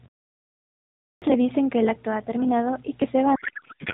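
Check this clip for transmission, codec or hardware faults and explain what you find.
Two faults stand out, heard through a narrowband mobile-codec sound that fits AMR-NB at its top 12.2 kbps mode.

Clipped start after a pause at 0.94 s: the output device sleeps through the silence and needs time to wake. About 0.28 s of sound is lost, so it begins abruptly.

Codec payload misread from 3.36 s to the end: octet-aligned AMR is decoded as bandwidth-efficient. Fields land in the wrong places. Speech turns to garbled noise and warble.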